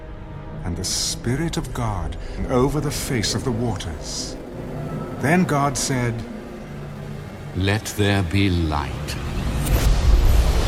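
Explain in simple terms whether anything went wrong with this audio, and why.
Yes, two things went wrong. First, a skip ahead at 2.38 s: the receiving system threw away about a second of audio that was delayed or didn't fit in its waiting area, and played the next part instead. You hear the sound jump forward, with the two sides joined almost seamlessly.

Second, a jitter buffer speed-up from 2.56 to 7.53 s: the system had stored more audio than it wanted, so it repeatedly snipped out tiny slices to catch up, about half a second in all. The sound plays roughly 11% faster at the same pitch, so it feels hurried.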